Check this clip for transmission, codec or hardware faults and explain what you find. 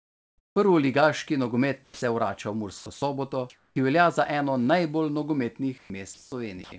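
Several voice-detector faults from discontinuous transmission occur in this speech clip, all consistent with a call path that band-limits the audio at 8 kHz, which points to a wideband codec such as G.722.

Comfort noise in place of the background, at 0.00–0.56 s, 3.50–3.76 s and 5.78–6.32 s: the sender likely paused transmission during non-speech, and the receiver synthesised noise instead. The real background, about 49 dB and 42 dB below the loudest speech in the first two stretches, becomes a flat, detail-free hiss, about 2 dB and 4 dB quieter respectively.

Sound dropped by the voice detector, at 1.84–2.02 s, 6.14–6.32 s and 6.64–6.72 s: the detector likely misjudged speech as background and stopped sending. Roughly 150 ms, 90 ms and 80 ms of speech vanish into steady noise before the signal resumes.

Sound chopped by the voice detector, from 2.78 to 3.02 s: the detector likely toggled on and off repeatedly, swapping about 160 ms of speech for comfort noise. 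The passage sounds choppy.

Onset clipped by the voice detector, at 3.73 s: the detector was likely late to reopen, so about 30 ms at the start of "ki velja za eno" was never sent. The phrase begins abruptly, lacking its soft attack.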